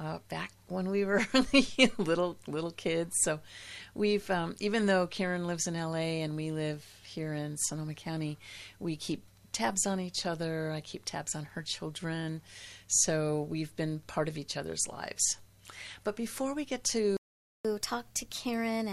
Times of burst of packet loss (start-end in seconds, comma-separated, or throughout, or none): none